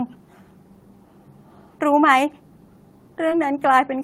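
A brief smear at 3.29 to 3.33 s in this speech recording, a wobble where the sound briefly loses its crispness and slides back into place, is short concealed packet loss. About 20 ms of the signal never arrived at the decoder in time. The receiver covered the gap by extending the preceding sound, roughly 16 ms of synthesized fill, then crossfaded back into the real audio, which leaves that soft, slightly blurred spot.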